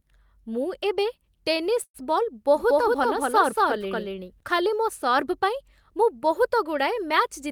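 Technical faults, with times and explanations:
1.83–1.96 s, call audio freeze: just after "ଏବେ ଟେନିସ୍" the sound stalls for about 110 ms, a fading buzz or hiss then roughly 60 ms of silence, likely from delayed packets emptying the jitter buffer; nothing is lost, later audio simply resumes late. Spectrogram shows smeared, decaying bands, then a blank gap.
2.54–4.40 s, doubled audio track: between "ଏବେ ଟେନିସ୍ ବଲ୍" and "ଖାଲି ମୋ ସର୍ଭ" a second, equally loud full-band copy trails by about 200 ms, likely a slower duplicate capture path. It has no reverb and starts and stops abruptly, appearing on the waveform and spectrogram as repeated, offset patterns.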